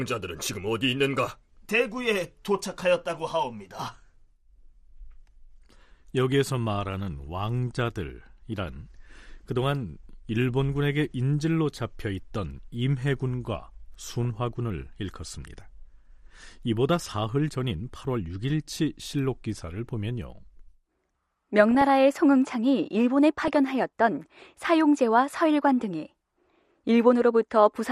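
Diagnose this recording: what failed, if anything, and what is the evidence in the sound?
The speech is dull and grainy all the way through, with a gurgling, granular edge on every syllable and a missing top end. That points to the codec stage, and the likely cause is MP2 compression at a low rate, consistent with about 80 kbps. Too few bits leave the upper sub-bands switched off and the rest coarsely quantised. On a spectrogram the highs stop at a hard, ragged ceiling, with bands flickering on and off between frames.

DAB burbling appears in three short bursts at 13.99 to 14.25 s, 21.71 to 21.90 s, and 23.41 to 23.56 s. Each one puts short blips of noise over the speech. This is a reception fault: residual bit errors, at a rate of a few tenths of a percent, got past error correction into the MP2 data. Corrupted samples put short noise blips in single sub-bands, and corrupted scale factors make sub-bands jump in level, and the bursts fit roughly 14, 8 and 7 damaged frames. 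A spectrogram shows isolated bright rectangular blocks in individual bands, each up to one frame wide.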